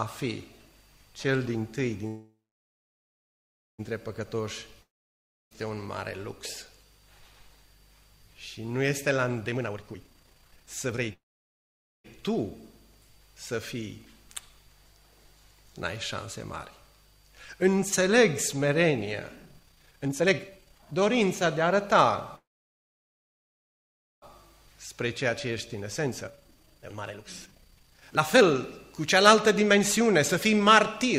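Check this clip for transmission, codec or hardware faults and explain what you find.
Three kinds of network fault appear, all pointing to packet delivery problems rather than codec or hardware trouble.

A call audio freeze occurs at 2.07–3.81 s, 11.13–12.06 s and 22.36–24.24 s. The likely cause is packets held up in transit, so the jitter buffer ran dry. The last sound is stretched into a short fading buzz, then silence for about 1.45 s, 0.86 s and 1.81 s respectively. The audio then resumes where it stopped, so nothing is lost but playback falls 1.71 s, 0.91 s and 1.86 s further behind.

A long network dropout runs from 4.81 to 5.53 s. Here the likely cause is audio that never arrived at all. After a brief fading tail the gap goes silent for about 0.66 s. When sound returns, roughly 0.7 s of material has been skipped, so the audio jumps ahead in continuity after the pause.

A jitter buffer speed-up runs from 9.48 to 11.12 s and again from 19.36 s to 31.05 s. 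Holding more audio than it aims for, the receiver trimmed short pitch-period slices repeatedly to cut its backlog. Pitch stays the same, but the audio is played at 173% of normal speed, removing about one second, and then at 128%, removing around three seconds. The result sounds noticeably hurried, and the second stretch is interrupted by the freeze at 22.36 s.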